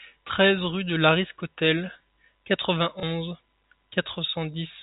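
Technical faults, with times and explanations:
3.00 to 3.03 s, packet loss with last packet repeated: one packet of the speech stream failed to arrive, and the receiver replayed the previous packet to fill the 30 ms gap, which fits a 30 ms packet size. Replayed just once, the packet gives a small blip. It is heard within the telephone band, which stops at 4 kHz.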